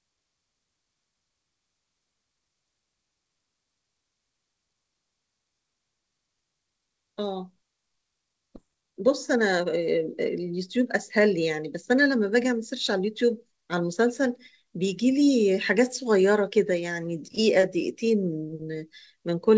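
At 8.56 s the speech has a skip ahead. Roughly a second and a half of audio never plays. It was lost in transit, or the jitter buffer threw it away when it overflowed with later audio already queued. Nothing fills the hole. The sound before 8.56 s butts straight against the sound after it. The join is abrupt, with no pause. Whatever was said in that stretch is simply gone.

A jitter buffer speed-up follows at 8.66 s and lasts until 13.81 s. After the skip, the buffer still holds more audio than its target. The receiver trims it down by cutting out tiny slices, one or a few pitch periods each, again and again. About 0.7 s is removed in total. The speech runs at 112% speed, but the pitch does not change. It sounds rushed. Throughout, the G.722 call codec leaves nothing above 8 kHz.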